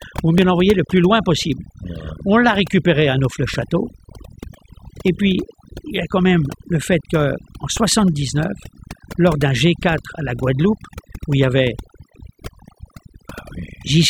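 Overdone noise removal runs through the whole speech clip. Frequency bands near the noise floor are pushed far down, leaving near-silent gaps with twinkling specks. At 0.38 s, just before "l'envoyer le plus loin", the sound jumps ahead. A tiny slice, around ten milliseconds, is missing with no silence, likely from a dropped buffer (overrun) where samples were overwritten before being read. At 4.95 s a similar skip loses a longer piece, around 40 ms, joining the two sides abruptly.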